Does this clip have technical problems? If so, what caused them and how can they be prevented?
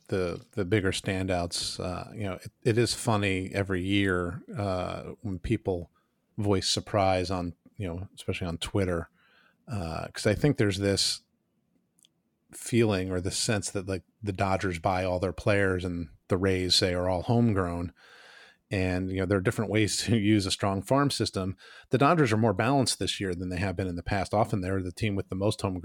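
No, this clip has no technical problems, so there is nothing that needs preventing.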